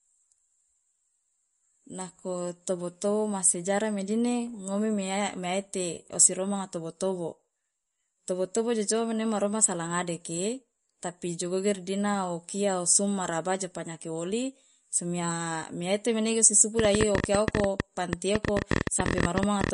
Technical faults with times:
0.00-19.73 MP3 compression
16.79-19.70 train of clicks

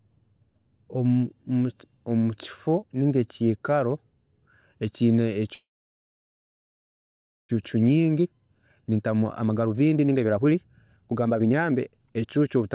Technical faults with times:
5.54-7.51 call audio freeze
7.75-12.71 jitter buffer speed-up

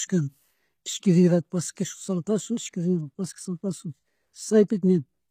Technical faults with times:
0.00-5.31 low-bitrate audio saved at a high bitrate

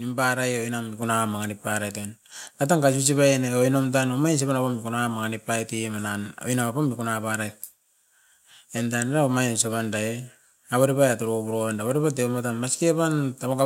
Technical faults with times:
1.02 microphone volume stepped up

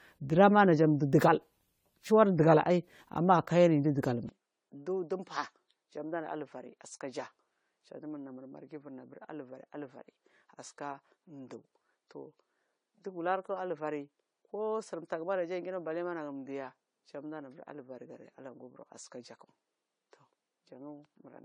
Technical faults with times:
0.00-21.45 generation loss
4.29-21.45 input switched to a poorer device

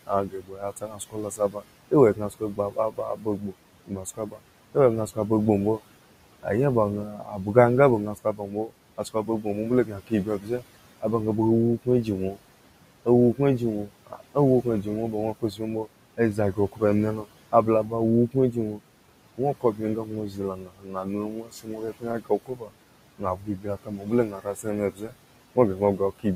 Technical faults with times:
0.00-26.36 noise suppressor artifacts
0.07-5.18 speech cut by the noise suppressor
7.08-7.47 speech cut by the noise suppressor
8.15-11.04 speech cut by the noise suppressor
11.85-12.39 speech cut by the noise suppressor
13.05-18.81 speech cut by the noise suppressor
19.37-26.26 speech cut by the noise suppressor

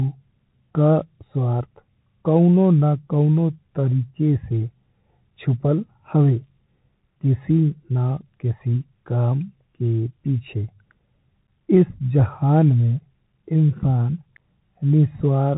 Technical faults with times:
0.00-15.58 Bluetooth CVSD headset codec

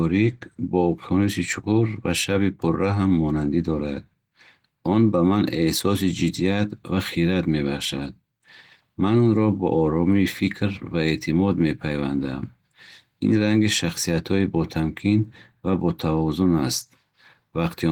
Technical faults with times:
none

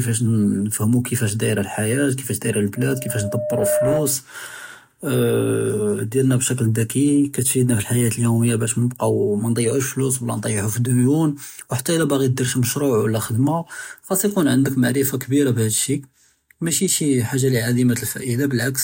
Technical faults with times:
2.76-4.18 loudspeaker feedback squeal

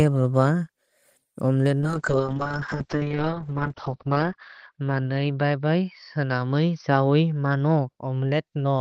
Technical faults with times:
1.81-8.80 call bitrate drop

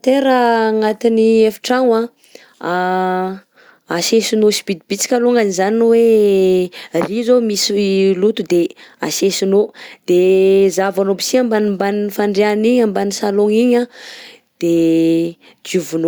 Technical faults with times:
none

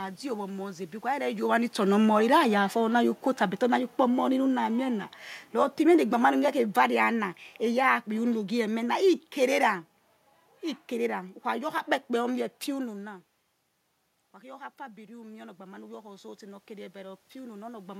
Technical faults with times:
1.90-9.80 automatic gain falling
14.33-17.95 automatic gain rising

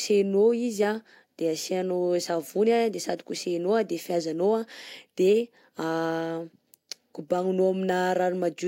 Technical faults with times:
none

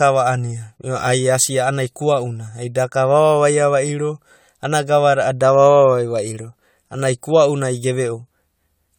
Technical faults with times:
0.00-8.99 generation loss

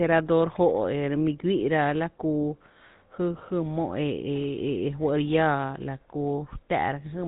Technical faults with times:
0.00-7.27 GSM full-rate codec

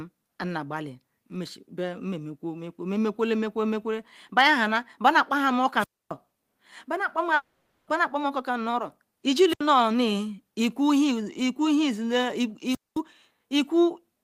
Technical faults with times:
5.78-6.12 wireless microphone squelch dropout
7.35-7.89 long network dropout
9.48-9.61 wireless microphone squelch dropout
12.67-13.00 wireless microphone squelch dropout

